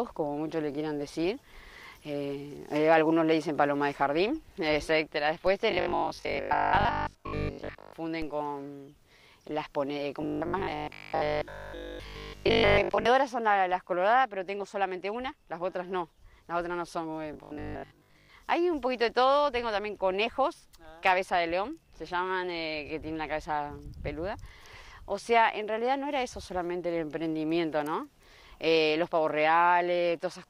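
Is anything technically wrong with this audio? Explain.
Yes, there are two kinds of fault. A DC step occurs at 5.47 s and again at 8.22 s. The waveform's zero line jumps suddenly, then drifts back as a roughly 5 Hz high-pass drains the offset. Each step is a single low thump under unchanged sound, with no buzz or tonal colour, unlike a dropout click.

Robotic sound from repeated short buffers appears from 5.71 to 7.93 s, 10.22 to 13.06 s and 17.33 to 18.29 s. A rigid, metallic 50 Hz buzz rides over the sound. This is likely caused by audio repeated in 20 ms chunks while most of the real material is skipped. The buzz's fixed pitch sets it apart from ordinary distortion or clipping.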